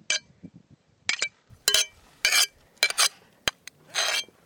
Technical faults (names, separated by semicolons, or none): input switched to a poorer device